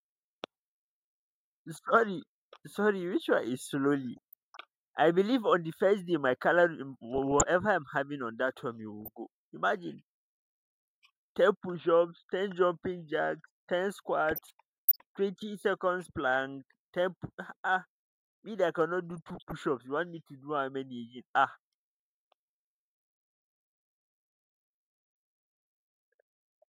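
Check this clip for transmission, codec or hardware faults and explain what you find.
Weak DAB reception has let bit errors, a fraction of a percent, slip past error correction into the MP2 audio, corrupting sub-band samples and scale factors. The result is DAB burbling at 4.17–4.57 s, 7.16–7.43 s (just before "I'm having on that"), 9.01–9.08 s (after "on that one you"), 14.29–15.01 s (between "jacks ten" and "twenty seconds"), and 19.11–19.52 s. Each burst puts short blips of noise into single sub-bands over the speech.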